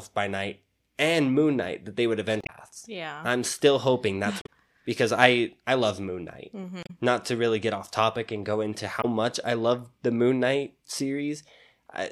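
At 2.39 to 2.50 s, after "that they would", the speech breaks up briefly, and similar glitches follow at 4.41 to 4.47 s, between "I'm still hoping that's" and "because I I love", at 6.83 to 6.90 s, and at 9.00 to 9.06 s, after "topic and go into". This is damaged data in a compressed stream. Corrupted bytes made the decoder misread frames and hunt for the next header.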